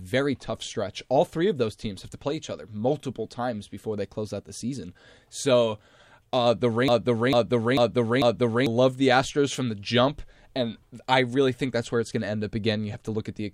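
From 6.88 to 8.66 s a broken-record loop repeats a 445 ms fragment four times, likely from a stalled stream, replacing the intended audio.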